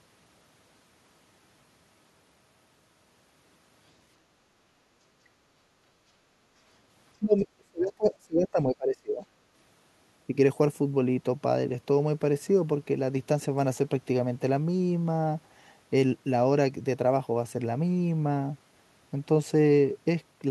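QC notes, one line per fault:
7.19–7.36 s, speech suppressed in double talk: the talker's level sinks by about 20 dB for roughly 0.15 s and then recovers. It is ducked rather than cut to digital silence as in a dropout. The likely cause is the echo canceller treating overlapping talk as its own echo and turning everything down.
7.38–7.47 s, other side's voice leaking through: a brief scrap of a second, far-end voice sits about 20 dB under the talker. It is short, not a steady background talker, which marks it as likely residual loudspeaker echo that the canceller failed to subtract.
7.57–9.24 s, speech suppressed in double talk: a longer and deeper ducking, reaching about 30 dB down and totalling roughly 1.5 s across the span. The talker is turned down while the other side is active, which points to likely echo-canceller suppression during overlap.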